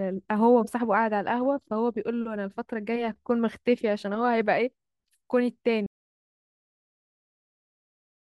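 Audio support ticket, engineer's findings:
Audio dropout to silence, 5.86 s to end. Speech cuts mid-flow to silence, no room tone, unlike a gate. Likely input link lost.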